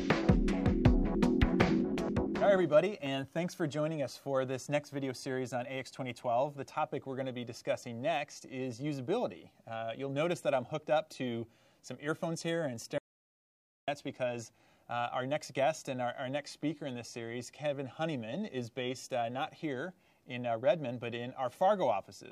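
At 12.98 s the sound cuts off abruptly into an audio dropout to silence lasting about 0.9 s, until 13.88 s; the input was likely lost while recording continued writing silence. The waveform shows a flat line and the spectrogram a blank, empty column.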